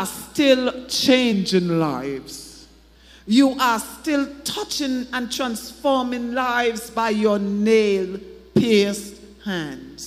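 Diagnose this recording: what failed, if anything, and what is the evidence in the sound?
A sample-rate mismatch at the playback stage caused a wrong sample rate fault from 1.32 to 2.95 s. Without conversion, the sound runs at 0.919 times normal speed and drops about 1.5 semitones in pitch. This fits 48 kHz material played out at 44.1 kHz.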